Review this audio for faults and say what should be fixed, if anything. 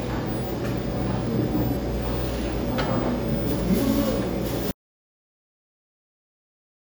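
Audio dropout to silence from 4.71 s to the end: the sound cuts off mid-flow into silence, a flat waveform and blank spectrogram with no room tone, likely from a lost input connection. Secure cables and monitor input levels while recording.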